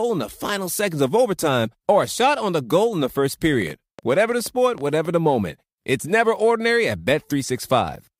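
A speech recording with a train of clicks running from 3.53 s to 5.06 s. About ten clicks arrive at an irregular pace averaging roughly 6.6 per second, each with much the same sharp shape and peaking at about the level of the speech itself. They tick through pauses as well as over the talking, so they sit on top of the signal rather than coming from it. This points to likely electrical interference from nearby equipment or a faulty connection or power supply.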